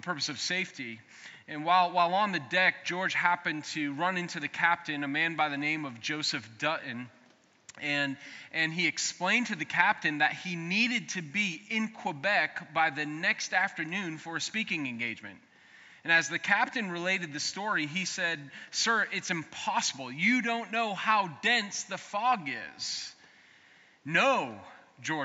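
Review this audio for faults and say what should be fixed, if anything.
Nothing here needs fixing; I listened all the way and didn't catch any technical problems worth flagging.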